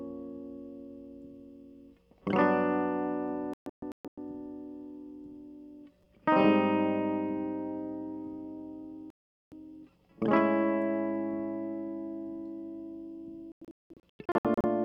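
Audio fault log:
3.54–4.18 s, 9.10–9.52 s, 13.52–14.64 s: digital broadcast dropout. The receiver mutes on failed frames, leaving holes of about 0.48, 0.42 and 0.67 s. The first and last are scattered, not single silences. The music resumes further on rather than where it stopped, unlike a stall.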